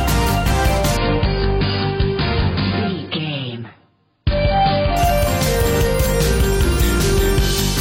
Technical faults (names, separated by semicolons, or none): adaptive stream at a lower bitrate